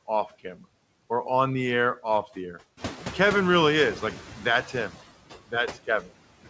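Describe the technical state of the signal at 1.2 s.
At 1.2 s there are noise suppressor artifacts, present across the whole clip. The suppressor pulls down bands it judges to be steady noise by about 16 dB, frame by frame. The leftover background pumps between phrases. Nothing reaches above 8 kHz, which fits a wideband call codec such as G.722.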